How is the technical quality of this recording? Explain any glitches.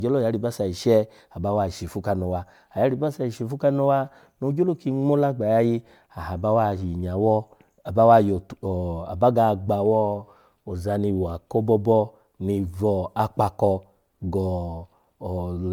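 The main problem is generation loss across the whole speech clip. It sounds swirly, smeared and hollow, with blurred consonant attacks, worse than 128 kbit/s MP3 alone would give. It's likely the result of roughly seven MP3 re-encodes, each adding fresh quantisation noise and spectral holes.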